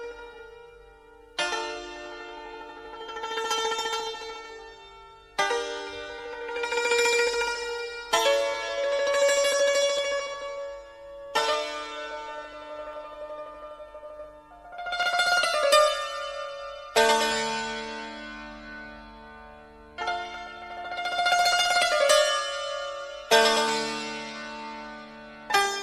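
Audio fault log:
9.98, 11.53, 12.93, 15.03 and 20.25 s: dropped samples. Each is a single sharp click with nothing missing around it, a thin vertical line from bottom to top of the spectrum. The likely cause is a fraction of a millisecond of samples going missing from the stream, so the waveform jumps straight from one value to a later one. That instant step holds energy at every frequency, which is why it clicks.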